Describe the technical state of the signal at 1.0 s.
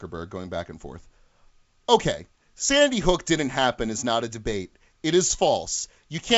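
Bit errors on an ADPCM link affect the signal from about 0.96 to 0.99 s. At a low error rate, roughly a tenth of a percent, flipped bits upset the decoder's adaptive step size and predictor. The damage rings on as a rough, level-jumping burst rather than a single clean click.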